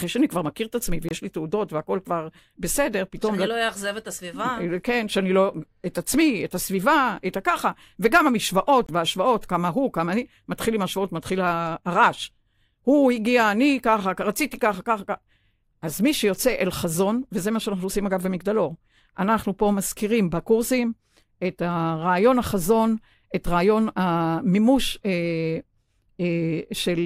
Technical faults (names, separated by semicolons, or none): block of digital silence